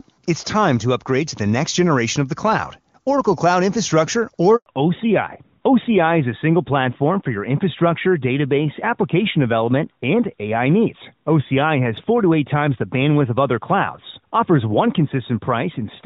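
Speech over a phone call starts in clear HD Voice, consistent with AMR-WB at its top rate, then hits a handover gap from 4.56 to 4.66 s. For 100 ms no frames arrived while the call switched networks, which shows as a flat, empty strip in both waveform and spectrogram. From 4.66 s to the end there is a fallback to narrowband. Everything above 4 kHz vanishes, leaving a hard ceiling at 4 kHz on the spectrogram and duller speech, which fits a drop to AMR-NB at about 12.2 kbit/s.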